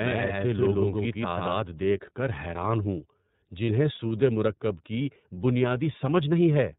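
Speech throughout sounds band-limited and slightly rough and synthetic, with nothing above 4 kHz and plainly audible coding damage. This points to the iLBC codec at around 13.33 kbps with 30 ms frames, a narrowband VoIP coder that codes each frame's excitation independently. From the very start until 1.56 s, every sound is heard twice: a dry, full-band copy about as loud as the original trails by roughly 150 ms and then cuts off abruptly. This doubled audio track is likely caused by a second, slower capture path or two misaligned copies in an edit. At 3.66 to 3.69 s and again at 5.34 to 5.39 s, the sound briefly turns into a held, slightly buzzy or breathy vowel before snapping back to normal. These are lost iLBC frames, each fitting a single dropped 30 ms packet, during which the decoder repeated the last pitch cycle mixed with noise. Because iLBC frames stand alone, recovery is immediate.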